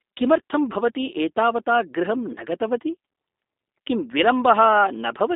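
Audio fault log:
throughout, G.729 codec: the speech is held to a telephone band of roughly 250 Hz to 3.7 kHz, with nothing above 3.8 kHz, and carries a plainly audible rough, buzzy, synthetic edge, which fits an 8 kbit/s G.729A stream. The codec rebuilds each 10 ms frame from a vocal tract filter, a pitch predictor and a few pulses rather than the waveform itself. Unlike simple band-limiting, the voice also sounds artificially reconstructed, not just muffled.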